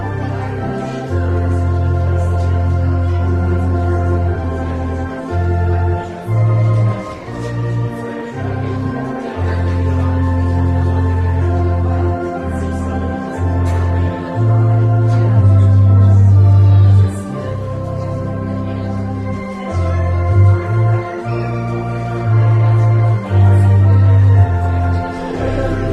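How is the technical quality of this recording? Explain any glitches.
No glitches or transport faults turn up anywhere in the recording.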